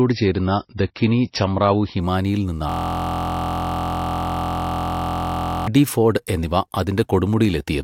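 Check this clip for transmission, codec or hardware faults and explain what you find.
Two faults are audible in this speech clip.

From 0 to 2.0 s, the adaptive stream starts at a low bitrate: the player begins on a heavily compressed version, so nothing sounds above 5.8 kHz until quality jumps abruptly.

From 2.69 to 5.67 s, a system hang loop occurs: the computer stalls while the hardware replays a 23.22 ms buffer, consistent with 1024 samples, producing a steady 43.1 Hz buzz.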